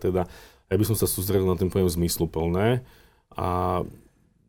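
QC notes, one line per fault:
Nothing to flag on this speech recording, as there's no fault to note anywhere in it.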